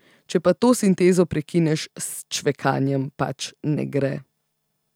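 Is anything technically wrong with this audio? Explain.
No, nothing technical stands out here, as this bit of speech comes across just as it should with no trouble to point to.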